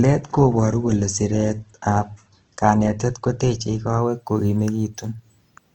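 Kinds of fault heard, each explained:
Adaptive stream starting at a low bitrate: the player opened on a cheap rendition so playback could begin straight away, then switched up once it had a read on the connection. For the first 4.0 s nothing reaches above about 8.4 kHz and the speech sounds dull with heavier codec smearing, which fits Opus at around 16 kbit/s. At 4.0 s the quality jumps cleanly, with no gap, to something that sounds like roughly 64 kbit/s.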